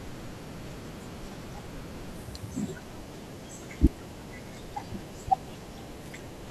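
No technical faults are audible anywhere in the recording.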